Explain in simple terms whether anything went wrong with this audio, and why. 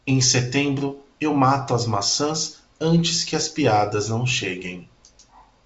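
Nothing went wrong: the speech comes through G.722 wideband telephone coding, which keeps sound up to about 7.7 kHz and drops everything higher, as that kind of call audio is meant to.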